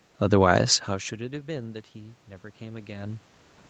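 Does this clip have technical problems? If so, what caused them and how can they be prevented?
Yes. From 0.86 to 3.3 s, the speech and the room noise behind it swell together by about 7 dB. This is automatic gain rising: the gain control slowly raised its gain after the input dropped by about 24 dB. Keeping a steady distance from the microphone prevents it.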